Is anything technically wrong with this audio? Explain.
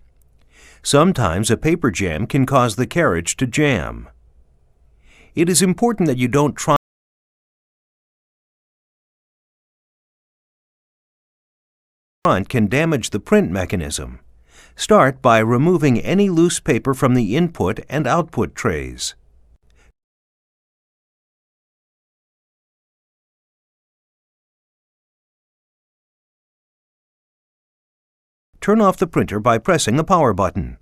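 Yes. There are two faults.

From 6.76 s to 12.25 s there is an audio dropout to silence. The sound stops abruptly and resumes mid-flow. The gap is silent with no room tone, and about 5.5 s of material is gone. The likely cause is a lost input, with the recorder still writing silence.

From 27.04 s to 30.80 s there is a jitter buffer speed-up. The receiver held too much audio and trimmed short pitch-period slices repeatedly to reduce delay. Playback runs at about 114% speed with unchanged pitch, so the passage sounds hurried. Roughly half a second is cut.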